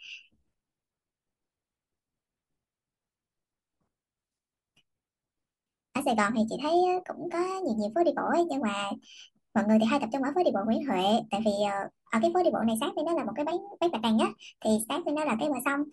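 Speech runs fast and high from start to finish. It is a wrong sample rate fault. Speed and pitch rise together, by 1.38 times and about 5.6 semitones. That ratio fits audio recorded at 32 kHz and played at 44.1 kHz without conversion.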